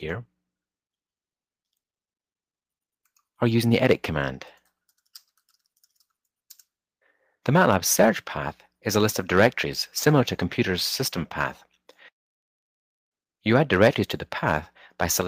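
No technical faults can be heard anywhere in this audio.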